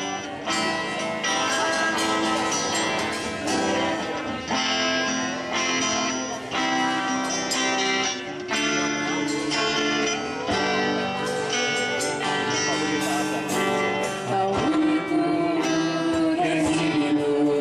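No technical faults are audible anywhere in the recording.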